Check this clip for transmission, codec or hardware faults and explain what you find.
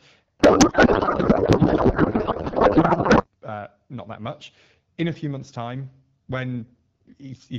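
One fault is present: a codec payload misread from 0.39 s to 3.28 s. For those three seconds the speech gives way to garbled noise and warble that barely tracks it. The decoder is unpacking valid-looking AMR frames with every field shifted out of place. That points to octet-aligned frames being read as bandwidth-efficient. At 3.28 s the packing agrees again and clear AMR wideband speech returns, its clarity fitting a 12.65 kbit/s rate.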